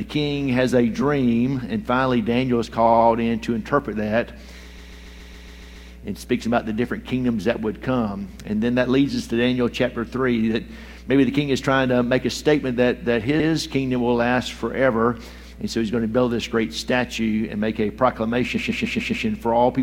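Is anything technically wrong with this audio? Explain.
Yes. There are repeated frames at five points. At 2.85 to 3.06 s a 70 ms block plays three extra times. At 4.77 to 5.88 s a 139 ms block plays eight extra times. At 7.41 to 7.43 s an 11.6 ms block plays twice more. At 13.39 to 13.48 s an 86 ms block repeats once. At 18.56 to 19.25 s a 139 ms block plays five extra times. In each case a run of compressed frames was written or sent again, so the decoder plays the same stretch back to back. You hear this as a stutter. A dropout would leave a gap, but here nothing is missing: the exact same material loops with no silence, and the audio runs longer by the repeated time.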